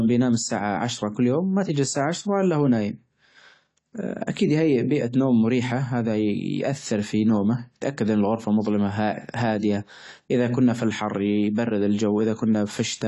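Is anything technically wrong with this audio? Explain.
Yes. The speech carries lossy compression artefacts from start to finish, most likely AAC compression at a low bitrate. Nothing is heard above about 11.5 kHz, so the top end sounds dull and closed in. The encoder splits the sound into frequency lines and spends its few bits on the parts the ear notices most. The rest is coarsely quantised or dropped. The damage is plainly audible. Sibilants fizz and sustained sounds warble. This fits a bitrate around 32 kbps.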